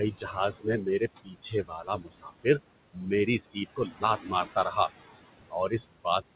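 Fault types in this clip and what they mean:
Overdone noise removal: Present throughout the clip. The noise reduction was set too aggressively for a room whose noise sits only about 13 dB below the speech. Bands that come close to the estimated noise floor are pushed nearly to nothing, and the quiet parts of the speech are taken along with them. The gaps fall to near silence scattered with twinkling specks.
Noise suppressor artifacts: Present throughout the clip. The suppressor works frame by frame and pulls down each band it judges to be steady noise, by about 20 dB at most. Between phrases the noise sinks away, and under the speech it comes back up. This sits alongside the 4 kHz top end, which fits a narrowband telephone-style call path.
Speech cut by the noise suppressor: This happens at 0.11–2.46 s, 2.93–3.06 s, 3.52–4.56 s and 5.5–6.22 s, with drops of about 19 to 22 dB. The suppressor mistakes parts of the speech for noise, so soft consonants, word endings and quieter stretches are pulled down with the background. 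The worst stretch is the opening, which loses about a second and a half of material in total. The later spans lose only fractions of a second, and there the speech sounds swallowed or faint.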